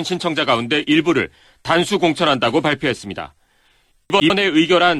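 At 4.1 to 4.3 s, chunks out of order: one 100 ms chunk plays one slot late, jumbling the sound, seen as three hard waveform breaks.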